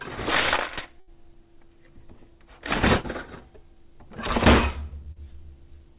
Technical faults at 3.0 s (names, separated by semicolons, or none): burst of packet loss